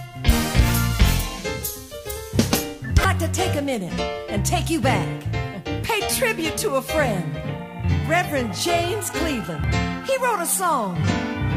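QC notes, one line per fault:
3.04 s, 5.83 s, 9.64 s: damaged data in a compressed stream. Short chirps, squawks, clicks or holes occur where corrupted frames are misread, breaking decoder sync until the next frame header.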